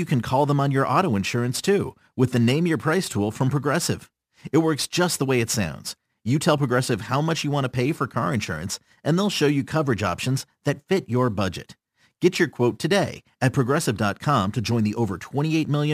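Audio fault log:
Throughout: crude rate conversion. The speech was moved from 48 kHz to 44.1 kHz by simply picking the nearest sample, with no filtering. The resulting error sits about 25 dB below the signal and forms tones unrelated to the pitch, a gritty fizz that rides on loud, bright syllables. Unlike steady broadband hiss, it vanishes in pauses.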